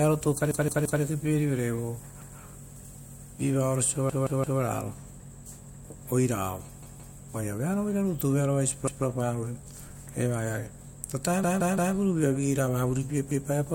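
Speech, marred by a repeated buffer. A 171 ms chunk plays again one to three times, with a hard join at each repeat. This happens at 0.51–1.02, 2.22–2.39, 4.10–4.61, 6.83–7.17, 8.88–9.05, 11.44–11.95 and 13.31–13.48 s. New audio arrived late, so the device replayed its last buffer. The chunk length fits an 8192-sample buffer.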